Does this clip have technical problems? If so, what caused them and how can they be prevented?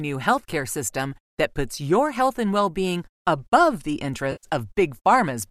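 Yes. Just after "well being above the", from 4.32 to 4.45 s, there is AAC frame loss with concealment. About 110 ms of coded audio went missing, which fits roughly a dozen lost frames. The decoder filled the gap from the last good spectrum rather than leaving silence or a click, and that is what separates it from a plain dropout. The underlying stream sounds like low-delay AAC coding, likely AAC-ELD at 64 kbps, and it shows only light coding damage on either side of the gap. Preventing this means protecting the stream against packet loss, with forward error correction, retransmission or a larger jitter buffer, so frames reach the decoder intact.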